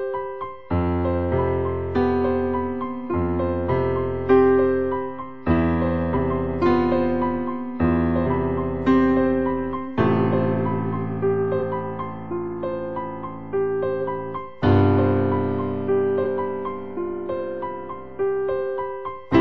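Compressed frames are skipped five times, at 6.16–6.19 s, 8.25–8.27 s, 9.87 s, 11.59 s and 16.23–16.25 s. Each time the sound jumps forward: roughly a tenth of a second at most points, about a fifth at 8.25 s, and about 50 ms at 9.87 s. These gaps are multiples of a frame length of about 46 ms, the sign of whole frames lost or rejected by the decoder.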